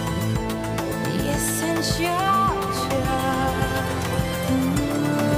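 At 0.91 s the audio lurches forward, with a short smeared blip where a stretch of sound should be, as if a piece had been snipped out mid-flow. This is compressed frames skipped: a run of encoded frames, around seven of them, was never played, either missing from the file or rejected by the decoder as damaged, so roughly 150 ms of material vanished. The jump size fits a frame length of about 23 ms, and the overlap between neighbouring frames softens the join into a blur, not a sharp click.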